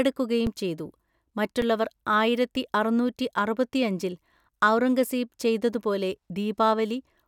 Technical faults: underrun with held sample

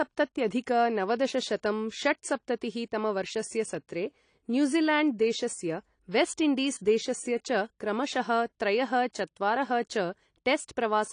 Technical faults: AAC compression

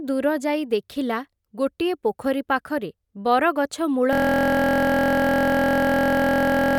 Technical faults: system hang loop

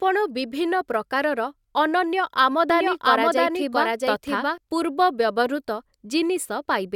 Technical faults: doubled audio track

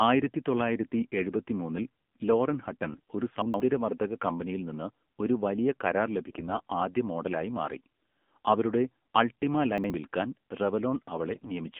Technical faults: AMR narrowband mobile codec; AMR bit errors; chunks out of order

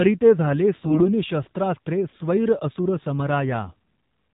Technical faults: AMR narrowband mobile codec; AMR bit errors

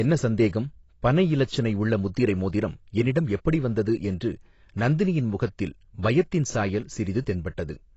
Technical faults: AAC compression

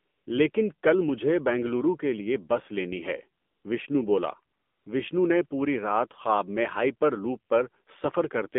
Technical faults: AMR narrowband mobile codec; AMR comfort noise

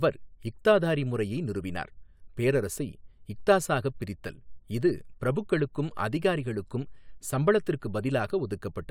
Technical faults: none

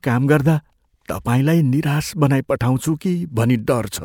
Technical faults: none

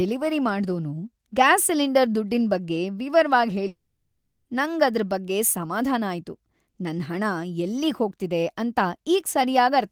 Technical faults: long network dropout

